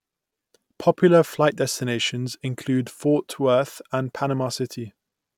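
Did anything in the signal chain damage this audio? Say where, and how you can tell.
No, nothing along the chain from capture through to playback has left an audible mark on this speech recording.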